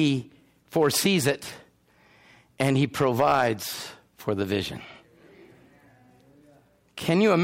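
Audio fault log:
0.76–1.30 s and 2.61–3.47 s, hard clipping: in both passages the speech drives a stage past its limit, about 5 dB over in the first and about 6 dB over in the second, so the waveform peaks are sliced off flat. Those squared-off tops add harmonics well above the voice's natural range, heard as a rough, crackling edge on each loud syllable. The second stretch is longer and slightly more overdriven.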